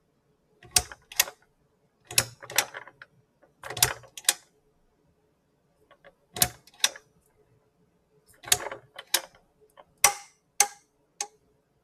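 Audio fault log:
Throughout: noise suppressor applied to music or sounds. A speech-oriented suppressor treats steady tones, ambience and reverb as noise and keeps riding its gain, with level swings of around 10 dB. Onsets get through while sustained parts and tails sag, so the sound pumps and thins.
0.02–2.44 s, 2.88–3.64 s, 4.0–8.44 s, 8.8–11.83 s: sound cut by the noise suppressor. In each stretch the suppressor judged the sound to be noise and pulled it down by as much as about 16 to 17 dB. Held and decaying portions sink or are chopped short, covering roughly half the clip in total.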